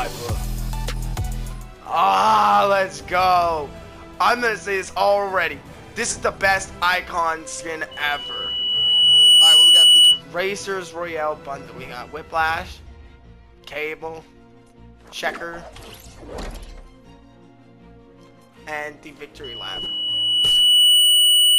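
Loudspeaker feedback squeal hits twice, a 3 kHz tone swelling over a second or so at 7.91–10.22 s and again from 19.44 s to the end, a mic hearing its own speaker.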